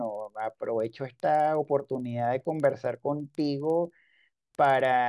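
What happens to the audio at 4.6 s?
The resampler restarted on every block, converting 48 kHz to 24 kHz in 50 ms pieces with no memory of neighbouring samples, so each block edge carries a small error. At 4.6 s, as throughout the speech, this is heard as a 20 Hz ticking buzz riding on the signal.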